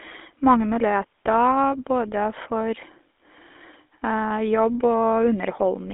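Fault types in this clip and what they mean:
GSM full-rate codec: throughout, the speech is rebuilt from a vocal-tract model driven by coarse pulse excitation, consistent with the 13 kbps GSM full-rate coder, giving plainly audible buzzy, gravelly roughness, a line band of about 250 Hz to 3.5 kHz and nothing above 3.8 kHz.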